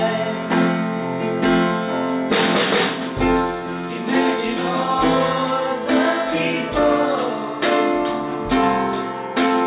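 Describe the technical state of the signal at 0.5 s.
The signal at 0.5 s is intact, with no audible fault at that moment.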